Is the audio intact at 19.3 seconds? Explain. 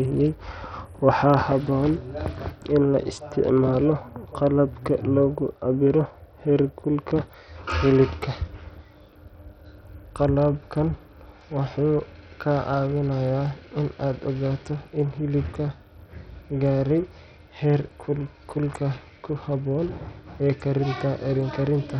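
No. At 19.3 seconds, as throughout the speech, the sound is thin and gritty, with treble flickering in and out and a rough quantisation hiss. This is likely Bluetooth SBC compression at a starved bit pool, consistent with around 64 kbps. Its wide sub-bands drop the top bands outright, so the treble flickers instead of the steady dull roll-off of a plain low-pass filter.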